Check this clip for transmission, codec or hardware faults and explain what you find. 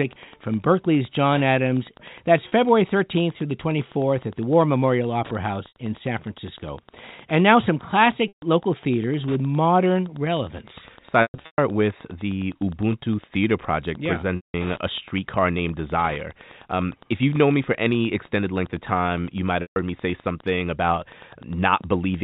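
Two faults are audible: radio-frequency ticking under the whole clip, and six dropouts bridged by repeated pitch.

Wi-Fi interference runs throughout as a steady tick near ten per second, matching a 102.4 ms beacon rectified by the audio circuit. It sits roughly 25 dB below the speech.

Packet loss with pitch repetition occurs at 2.48, 5.68, 8.28, 11.22, 14.36 and 19.62 s. The lost spans are 40, 80, 140, about 280 (scattered over 360 ms, longest run 120 ms), 180 and 140 ms. The gaps fit 20 ms packets. The receiver repeats the last pitch period, so the 40 ms loss sounds like a briefly held buzzy tone. The longer losses fade to silence before speech cross-fades back in.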